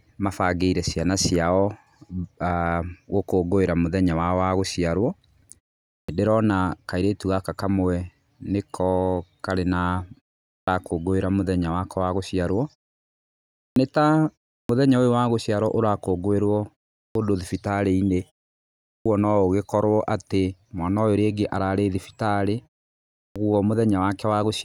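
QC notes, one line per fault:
5.99, 10.58, 13.68, 14.6, 17.07, 18.96 and 23.27 s: clipped start after a pause. After each 0.31 to 1.01 s gap, the output device is still waking, so the first 82 to 96 ms of speech is swallowed and words such as "ndĩrona kairĩtu gaka kamwe" and "ũyũ wa gũciarwo ũrakũngũĩrwo" start abruptly. Unlike muted pauses, which would only drop background in the gaps, actual speech onsets are lost here.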